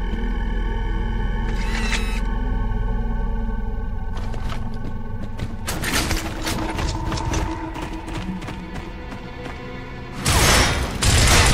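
No dropouts, clicks, distortion or other technical faults can be heard anywhere in the clip.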